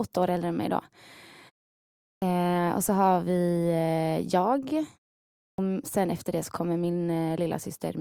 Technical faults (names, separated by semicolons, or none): clipped start after a pause